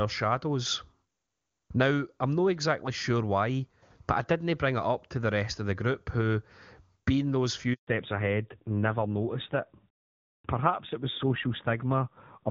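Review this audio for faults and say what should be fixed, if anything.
The speech cuts to silence from 7.73 to 7.87 s, a 140 ms handover gap where no frames arrived while the call switched networks. From 7.87 s to the end it turns dull and rougher, with nothing above 4 kHz; this fallback to narrowband points to a drop from HD Voice (AMR-WB, clear before the gap) to a low-rate AMR-NB codec. Keeping the call on a network path that supports wideband through handover, with make-before-break switching and codec negotiation that holds AMR-WB, would prevent both.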